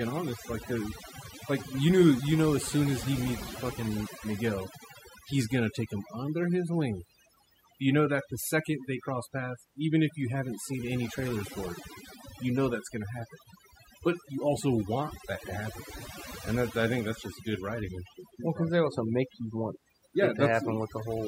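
From start to finish the speech carries overdone noise removal: a denoiser pushed too hard, cutting individual frequency bands that sit near its noise estimate. Quieter parts of the voice get pulled down too, over a lowered, twinkly background.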